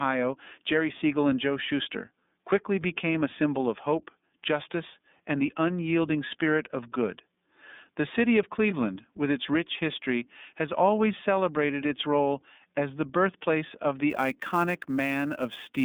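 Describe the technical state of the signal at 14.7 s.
At 14.7 s the speech carries iLBC codec damage, present throughout. Each 30 ms frame is coded independently, and the band is cut to roughly 200 Hz–3.6 kHz, with nothing above 3.8 kHz. The result is a narrow, slightly rough, synthetic tone that fits iLBC's 30 ms mode at about 13.3 kbps. The roughness comes from frame-wise excitation coding rather than the steady swirl of a transform codec.

Sample clock jitter also runs from 14.10 s, just after "as the birthplace of", to the end of the clip. Sampling instants wander by around 7 microseconds, creating an error about 25 dB below the signal. It is heard as hiss that swells on loud, bright sounds and disappears in pauses, unlike a constant noise floor.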